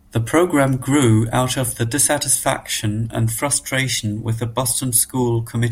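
Right after "grew out of the", at about 2.39 s, there's a quick blip from damaged data in a compressed stream. Some of the encoded bytes there were corrupted, so the decoder misread the frame, lost sync and hunted for the next header, leaving a brief glitch.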